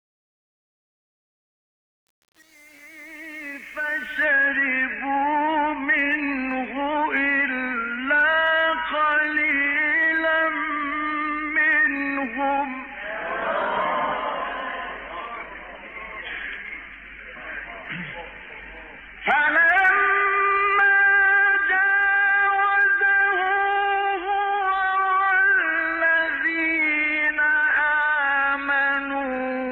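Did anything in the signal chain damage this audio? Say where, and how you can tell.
Yes. Truncation distortion on a fade appears over the opening fade-in, from 0.0 to 4.25 s, and is worst from 0.0 to 4.03 s, before the level climbs clear. The quiet start sounds gritty instead of rising smoothly. This points to a digital gain or sample-format conversion stage that truncated to very few bits without dither, which fits roughly 7-bit resolution. Low-level waveforms collapse into coarse square steps.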